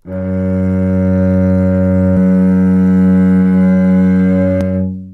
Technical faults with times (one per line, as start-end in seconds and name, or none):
2.17-4.61 doubled audio track